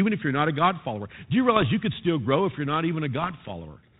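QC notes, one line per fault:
1.56 to 1.68 s, bit errors on an ADPCM link: a short burst of pops and rough crackle, with the level jumping briefly, just before "you could still grow". Each flipped bit throws off the decoder's step size and prediction, so the damage rings on for some milliseconds. The error rate sounds low, well under one percent.
3.24 to 3.51 s, bit errors on an ADPCM link: a longer, denser rough burst with uneven loudness, right after "grow if you're not". The error rate is higher here, roughly half a percent. The audio is band-limited below 4 kHz, which fits 32 kbit/s G.726.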